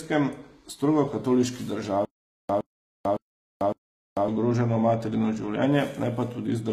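Throughout, the treble sounds gritty and lispy, with nothing above 14.9 kHz, likely HE-AAC compression rebuilding highs from lower bands, which fits a low bitrate around 20 kbps.

From 2.05 to 4.28 s, after "strogo katoliški", a 114 ms burst repeats four times, each followed by 444 ms of silence, until "ogroženo materino". This stutter with silent gaps is likely a stalled stream replaying its last fragment.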